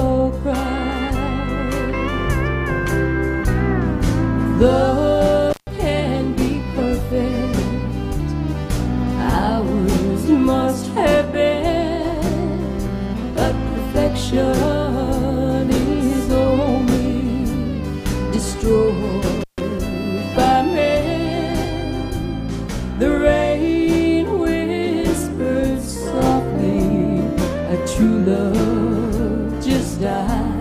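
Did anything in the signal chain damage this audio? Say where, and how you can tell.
Yes. An intermittent contact in the analogue wiring briefly opened the line twice, at 5.50 to 5.67 s and 19.41 to 19.61 s, each open for 142 ms. The sound drops out, crackling at both edges and leaving faint hiss during the gap.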